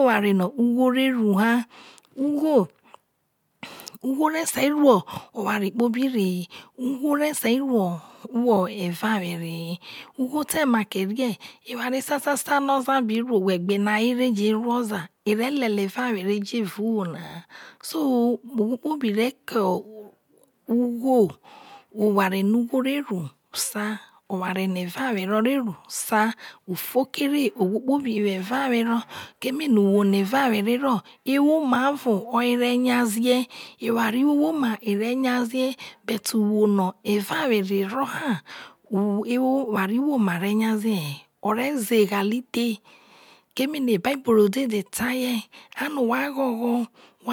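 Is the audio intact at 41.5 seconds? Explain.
Yes, the speech at 41.5 seconds is intact, with no audible fault at that moment.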